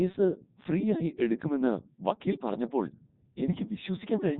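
Speech passed through a Codec 2 vocoder from start to finish, sounding consistent with its 3.2 kbit/s mode. The decoder rebuilds the speech from sine waves, leaving it heavily robotic and buzzy.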